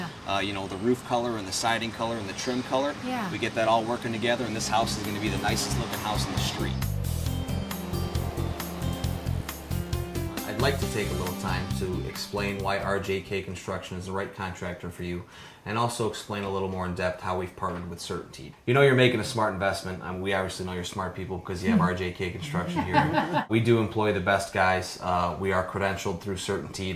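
Nothing in this audio stood out as a technical problem on listening.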